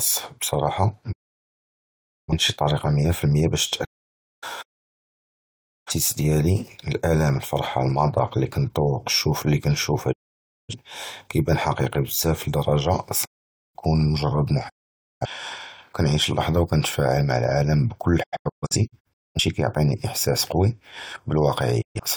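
Speech with repeated digital broadcast dropouts at 1.11–2.33 s (ending just before "שִי טְרִיקָה מִיַה פִי"), 4.61–5.93, 10.11–10.74, 14.68–15.26, 18.22–19.40 (several short holes, longest about 0.21 s) and 21.80–22.00 s. In each, failed frames muted the receiver behind a 20 ms fade, leaving blank vertical bands on a spectrogram and flat gaps in the waveform. Two playback stalls at 3.84–4.43 and 13.25–13.76 s stop the sound in mid-flow for about half a second each, likely because the player ran short of data, and show as similar empty gaps.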